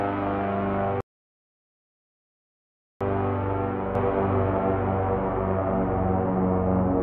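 A playback stall runs from 1.01 s to 3.01 s: the sound halts in mid-flow and the output stays completely silent for 2 s before it resumes. A gap this long most likely means the player ran out of data or its thread was blocked, so nothing reached the output until it recovered.

A doubled audio track starts abruptly at 3.95 s and continues to the end. A second, full-band copy of the sound trails the original by roughly one second, at about the same level. It is an exact repeat with no decay or room colour, so it reads as two identical streams playing out of step rather than as an echo. This is likely the same audio captured twice, once through a slower path.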